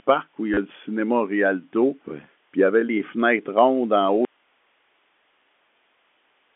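At 0.54 s there is packet loss with the last packet repeated, lasting until 0.57 s. About 30 ms of audio went missing, which fits three 10 ms packets. The receiver filled the hole by replaying the last good packet. The copies seldom join the next in step with the pitch. Together they form a brief buzz near 100 Hz. It sounds like a quick robotic stutter.

From 4.25 s to the end there is an audio dropout to a faint residue. The sound stops abruptly in mid-flow. It does not fade or pause naturally. Only hiss remains, about 45 dB below the earlier level. That live hiss shows the path after the break kept running, so the likely cause is a lost feed upstream. Before the cut, the narrow telephone band of the G.711 coding is audible.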